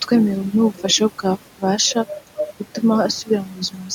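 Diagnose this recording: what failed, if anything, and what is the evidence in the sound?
The call processing stage is where this went wrong: you can hear noise suppressor artifacts all the way through. The room noise, sitting about 20 dB under the speech, gets pulled down by about 12 dB between phrases and swells back under the talking.

There's also speech cut by the noise suppressor from 0.75 to 0.84 s, about a tenth of a second where a soft stretch of speech gets swallowed. The suppressor mistook it for background and pulled it down by up to about 10 dB, so it comes out faint.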